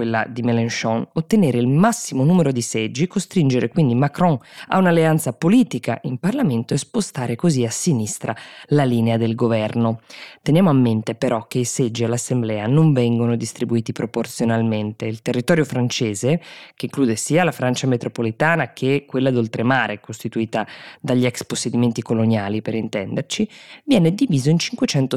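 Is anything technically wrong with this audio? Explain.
No, nothing technically wrong can be heard here.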